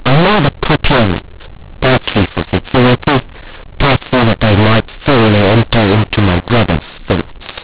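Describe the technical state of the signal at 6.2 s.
At 6.2 s the speech carries a mu-law and A-law mix-up, present across the whole clip rather than just this moment. The G.711 stream was encoded with the mu-law curve but is being expanded with the A-law table, so each 8-bit code maps to the wrong level. Some samples come out too loud, others too quiet, and near-silent samples are pushed well above zero, giving harsh, distorted speech with noise filling the gaps within the 4 kHz telephone band.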